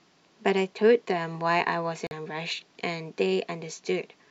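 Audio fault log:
2.07–2.12 s, Bluetooth dropout: the speech cuts out for a moment, leaving a brief hole of silence before the sound returns at a later point, as though it had kept playing through the gap rather than pausing. The likely cause is audio packets failing to reach the headphones in time and being discarded. The missing stretch of about 43 ms fits roughly two lost frames.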